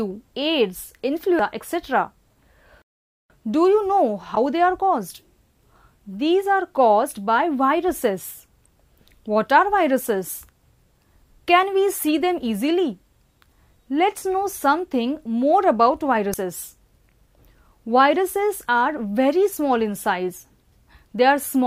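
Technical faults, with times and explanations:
1.39 s, 4.34–4.37 s, 8.66 s and 16.34 s: damaged data in a compressed stream. Corrupted bytes make the decoder misread frames and lose sync, so each spot gives a short chirp or blip, the longest lasting about 36 ms at 4.34 s.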